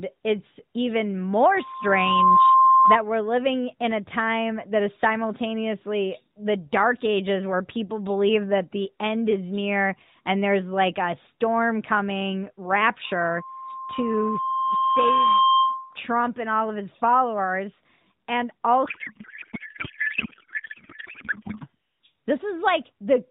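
A speech recording, carried over narrowband AMR with nothing above 4 kHz, has two bursts of loudspeaker feedback squeal, from 1.54 to 2.98 s and from 13.04 to 15.98 s. Each time the microphone re-amplifies the loudspeaker until a 1 kHz tone runs away. The first swells in under a second to about 10 dB above the speech. The second creeps up over about three seconds to about 5 dB above it. On a spectrogram each appears as a single bright horizontal line at 1 kHz that thickens as it grows, and on the waveform as a swelling envelope. From 18.86 to 21.66 s a codec payload misread replaces the speech with garbled noise and warble that barely tracks it. This fits octet-aligned AMR frames being unpacked as bandwidth-efficient ones, so every field is read from the wrong bits. The spectrogram loses its harmonic and formant structure and shows a smeared, noisy texture below 4 kHz with abrupt edges at both ends.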